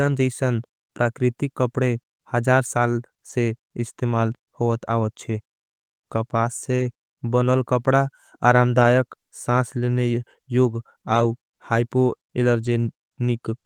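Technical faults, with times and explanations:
3.29 to 12.67 s, lost packet rebuilt from error correction: five short stretches, at 3.29–3.35 s (between "प्रकृतिक कपड़े हजार साल" and "इस्तिमाल होवत आवत छे"), 6.79–6.81 s (just before "बनल कपड़ा"), 8.79–8.85 s, 11.15–11.25 s and 12.65–12.67 s, each 20 to 60 ms, which fits runs of one to three 20 ms packets. Each missing packet was replayed from the low-bitrate copy carried in the next one, so nothing drops out, but those moments sound briefly rougher and noisier.
6.75–6.81 s, short concealed packet loss: just before "बनल कपड़ा", 40 ms of audio arrived too late to decode. The receiver bridged the hole by extending the preceding sound, continuing its pitch where it was voiced or shaped noise where it was not, then blended back into the real signal. This comes across as a brief smear or wobble. The last 20 ms of the gap coincides with the rebuilt copy at 6.79 s.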